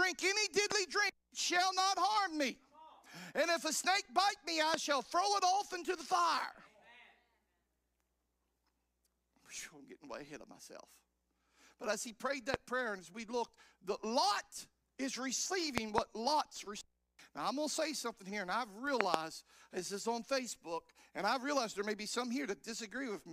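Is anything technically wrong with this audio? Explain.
Yes. Loud pops hit at 0.72–0.74 s, 4.74–4.76 s and 12.54–12.56 s, with double pops at 15.78–16.00 s and 19.01–19.16 s. Each is a sharp thump about 20 to 25 dB above the sound, which continues underneath. The likely cause is a sudden voltage pulse from a plug, a switch, static or a driver glitch being added to the signal.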